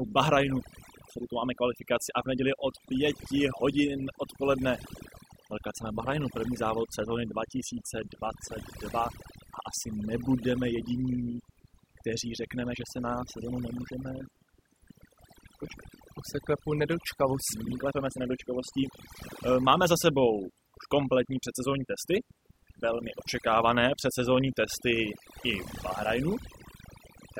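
From start to finish, the speech has overdone noise removal. The noise reducer was pushed too hard, so any frequency band sitting close to its idea of the noise gets pulled way down or shut off entirely. The quieter parts of the voice sit right at that level and get cut along with the noise. That leaves the background dropped away and broken up into little twinkling, warbling specks.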